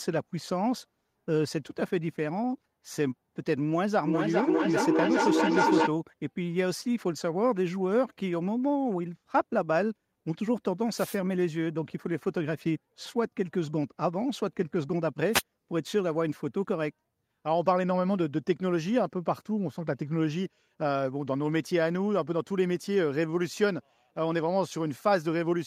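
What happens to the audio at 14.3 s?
Nothing goes wrong at 14.3 s; the speech there is intact and continues without any audible fault.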